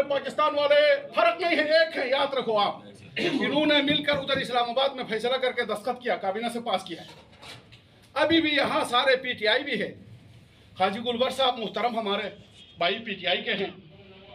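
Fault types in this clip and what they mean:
No technical faults can be heard in this audio, and the signal holds steady throughout with nothing that points to a problem in capture, processing or playback.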